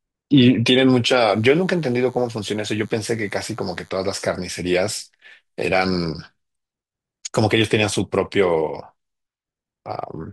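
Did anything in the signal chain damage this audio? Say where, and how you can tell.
Yes. From 1.29 s to 3.90 s a thin, steady buzz sits under the speech, well below it at about 35 dB down, with a fundamental at 100 Hz and a dense stack of harmonics. This is DECT cordless phone buzz entering at the analogue stage. A nearby DECT handset or base transmits a radio burst every 10 ms, and the analogue audio circuitry rectifies each burst, turning the 100 Hz burst rate into an audible buzz.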